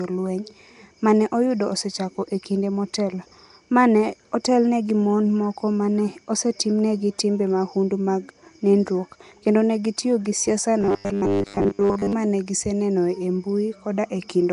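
Nellymoser compression runs through the whole clip, with nothing above 10.6 kHz and plainly audible coding damage that fits roughly 44 kbps. Its likely cause is the Flash-era codec spending a fixed two bits per sample on blocks, leaving weak bands noise-filled, which gives the speech a smeared, hissy roughness.

Robotic sound from repeated short buffers follows "kendo ne gitiyo gi", from 10.81 to 12.13 s: a rigid, metallic 100 Hz buzz replaces most of the speech. The likely cause is the software looping a 10 ms stretch of stale audio while fresh audio arrives too late and is skipped.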